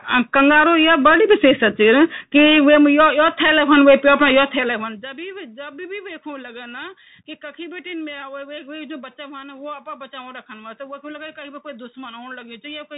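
A speech recording carries Bluetooth CVSD headset codec damage throughout. Nothing above 3.8 kHz survives, s sounds turn scratchy, and granular hiss sits underneath, which fits a 64 kbps CVSD stream. From 4.41 to 5.19 s, zipper noise rides on a level drop of about 20 dB. The fade moves in unsmoothed steps, around a hundred a second, and each step clicks.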